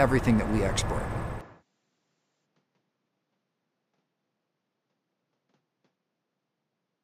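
At 1.41 s the sound abruptly loses its top end and stays that way to the end. Nothing above 7.6 kHz remains, the level drops by about 5 dB, and a new, faint background noise appears roughly 45 dB below the signal. There is no gap at the changeover. This is likely an input switched to a poorer device. A simple filter or codec bandwidth drop would not also bring its own level shift and noise floor.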